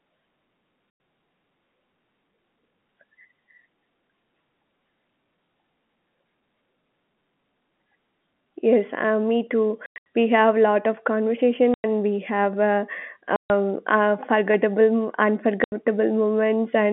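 Packet loss filled with silence: the receiver lost packets and played silence instead. This chops the speech with hard-edged gaps at 0.9 s (100 ms), at 9.86 to 10.06 s before "we have lot of", at 11.74 s after "have lot of conversation", at 13.36 s before "uh forgettable", and at 15.64 s (80 ms). The gaps come in multiples of 20 ms, which fits 20 ms packets over the G.711 telephone line.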